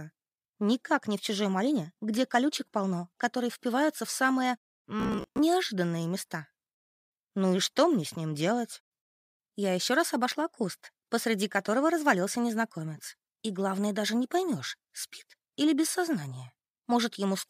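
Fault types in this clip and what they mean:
Robotic sound from repeated short buffers: from 5.0 to 5.39 s the audio becomes a rigid, metallic buzz at 66.7 Hz, likely a 15 ms segment replayed while new audio arrived late; about half is repeated. Unlike a dropout, nothing goes silent.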